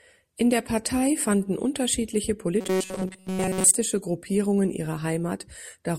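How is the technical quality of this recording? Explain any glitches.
One clear glitch: from 2.61 to 3.75 s, right after "fanden unterschiedliche", the speech turns into a rigid metallic buzz at 188 Hz. This is robotic sound from repeated short buffers, likely caused by audio arriving too late so a roughly 5 ms chunk is replayed for most of that stretch.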